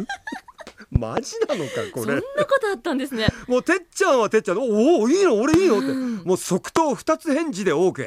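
A sudden voltage step or pulse, likely from a plug, switch, static discharge or driver glitch, has been added to this speech recording, producing loud pops that stand around 20 dB above the speech. A quick double pop falls between 0.96 and 1.20 s, and single pops land at 5.54 to 5.56 s and 6.76 to 6.79 s. Each is a sharp thump over the speech, which carries on underneath.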